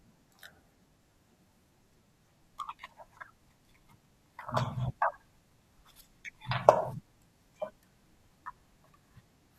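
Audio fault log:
Nothing wrong turned up in this speech recording, so there's no fault to log here.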